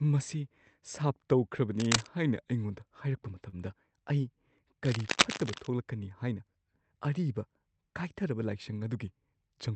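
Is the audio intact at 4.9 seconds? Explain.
No. At 4.9 seconds the speech is covered by cable scratch noise, which runs from 4.85 to 5.67 s. It sounds like dense, uneven scratching and rustling, roughly as loud as the speech. The likely cause is a worn cable or connector being moved, so its contact resistance jumps around rapidly.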